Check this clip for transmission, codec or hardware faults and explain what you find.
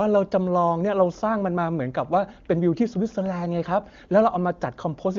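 No transmission, codec or hardware faults turn up in this clip.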